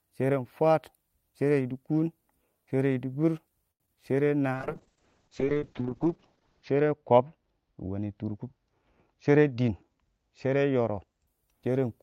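A short stall from a late packet occurs at 3.71 to 3.82 s. A packet missed its playout time and the jitter buffer ran dry, so the receiver stretched the last sound for 85 ms and then resumed where it left off. Nothing is lost, but the speech hangs unnaturally, and the playout delay grows by 85 ms.

Short concealed packet loss follows at 3.86 to 3.89 s. About 20 ms of audio never reached the decoder, and the receiver papered over it with 15 ms of extrapolated sound before blending back into real audio, leaving a brief smear or wobble in the speech.

A call bitrate drop runs from 4.55 to 11.33 s. The bandwidth estimate fell, and the encoder went from 32 kbps down to 6 kbps, staying at the lowest rate for 2.15 s. The audio bandwidth narrows from 20 kHz to 8 kHz, so the speech turns muffled and rough, with a watery coarseness, until the rate recovers.

A jitter buffer speed-up happens at 9.07 to 9.73 s. 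With more audio queued than needed, the receiver trimmed pitch-period-sized pieces repeatedly, removing about a tenth of a second. The speech plays at roughly 111% speed at unchanged pitch and sounds noticeably hurried.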